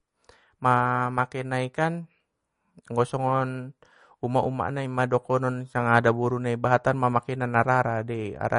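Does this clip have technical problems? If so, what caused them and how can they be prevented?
Yes. Throughout, the speech sounds watery and swirly with nothing above 10.6 kHz, likely MP3 compression starving bits, which fits roughly 40 kbps. Encode at a higher bitrate to prevent it.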